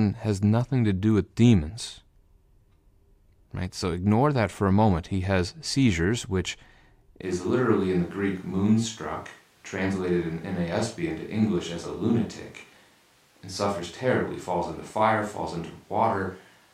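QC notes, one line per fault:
7.23 s to end, switch to a distant microphone: the speech suddenly turns roomy and hollow, loses bass and drops roughly 5 dB, with room noise becoming audible about 35 dB below it. The close microphone likely failed, leaving only a farther pickup.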